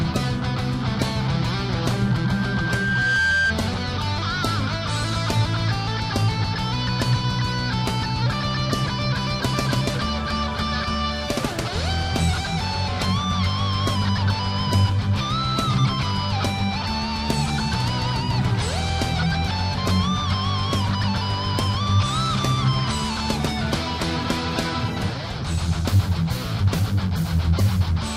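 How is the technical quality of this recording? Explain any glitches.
The recording has one clear glitch. Loudspeaker feedback squeal runs from 1.96 to 3.55 s: the microphone re-amplifies its own loudspeaker until a 1.6 kHz tone swells over about a second, ending around 5 dB above the sound.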